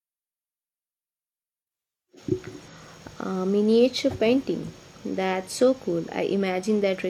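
No technical faults can be heard anywhere in the recording, and the signal stays steady and intact throughout.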